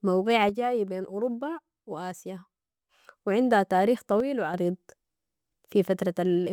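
A speech clip where one stereo channel likely drops out twice, so after mono summing the shared sound falls abruptly by about 6 dB: from 0.49 to 2.89 s, just before "و عندها تاريخ", and again from 4.20 to 4.54 s, just after those words.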